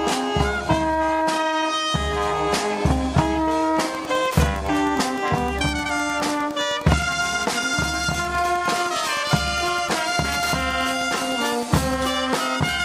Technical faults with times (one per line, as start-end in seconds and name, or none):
3.94-11.94 Wi-Fi interference